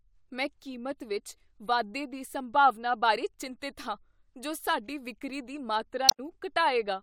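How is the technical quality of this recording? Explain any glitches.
The recording has one glitch, from 6.08 to 6.20 s: damaged data in the compressed stream. Corrupted bytes make the decoder misread frames and lose sync until it finds the next valid header, so the speech breaks up briefly for about a tenth of a second.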